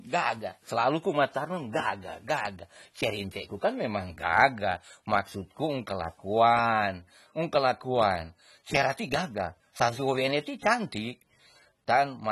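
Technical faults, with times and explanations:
throughout AAC compression: speech is dull and smeared, with warbling sibilants and nothing above 12 kHz, likely from low-bitrate AAC-LC around 32 kbps; the spectrogram shows a flat ceiling.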